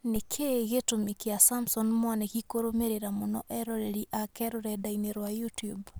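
Speech, with no audible faults.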